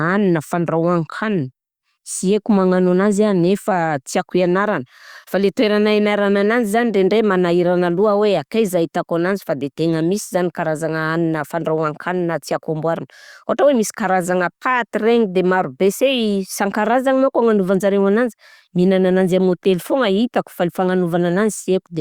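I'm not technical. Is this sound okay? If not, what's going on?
Yes, there's nothing wrong to hear in this recording.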